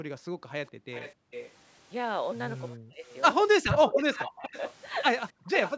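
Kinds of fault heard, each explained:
Background gated by the echo canceller: From the start to about 1.31 s, the room tone underneath the speech sinks and drops out for roughly a second in total, falling by about 40 dB at its deepest, then returns. The canceller is closing the microphone down while the far end plays. Unlike double-talk suppression, the loss hits the ambient bed between and under the words rather than cutting into the talker's own voice.
Echo leak: A faint, delayed copy of speech trails the talker by 413 ms, around 0.66 to 1.51 s, 3.73 to 4.73 s and 5.52 to 5.71 s. It sits about 15 dB below the main voice, rising to about 10 dB below at the end. This is likely far-end loudspeaker sound that the canceller failed to remove and sent back. Its fixed delay and its separate character distinguish it from room reverberation, which smears continuously rather than repeating late.
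Speech suppressed in double talk: The talker's own voice dips sharply or breaks into fragments at 2.7 to 3.05 s, 3.59 to 4.52 s and 5.31 to 5.5 s, losing roughly 30 to 40 dB at its deepest. The likely cause is both sides speaking at once, so the canceller could not tell local speech from echo and attenuated everything. The foreground voice itself is chopped, which sets this apart from background gating, where only the room sound vanishes.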